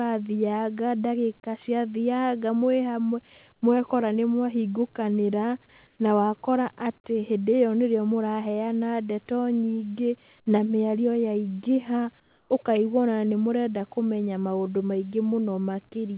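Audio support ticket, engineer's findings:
Comfort noise in place of the background at 3.53–3.62 s (90 ms, about 9 dB quieter), 5.87–5.99 s (120 ms, about 5 dB down) and 12.2–12.5 s (300 ms, about 6 dB down). Real room tone, roughly 37 dB under the loud passages, drops out, replaced by flat, featureless hiss. Likely discontinuous transmission: sender's voice detector gated the pauses, receiver synthesised shaped noise. Band-limited to 4 kHz throughout, consistent with a 64 kbps G.711 A-law leg.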